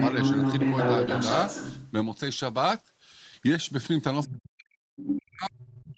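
A speech clip with the other side's voice leaking through: from 0 to 1.91 s a second voice sits at roughly the same level as the talker, then brief scraps return at 4.25–4.29 s and 5.69–5.73 s, far quieter. The likely cause is an echo canceller leaving loudspeaker playback in the microphone. Unlike a real background talker, these fragments come and go and share the call's 8 kHz band limit.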